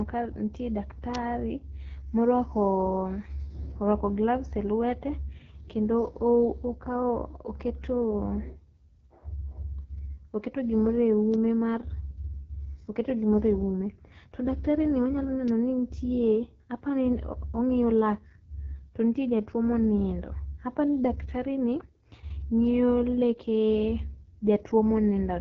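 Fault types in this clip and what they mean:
AMR wideband (HD Voice) codec: The speech passes through the AMR-WB coder at a low rate, which fits its 8.85 kbit/s mode, so it sounds rough and raspy throughout. Unlike narrowband telephone coding, the band reaches well past 4 kHz, with nothing above 7.4 kHz.
Bit error spike: A single flipped bit throws one sample far off its value before it snaps back. This gives isolated sharp ticks at 11.34 s and 15.48 s. They are broadband and unrelated to the speech, unlike the continuous raspiness from the codec.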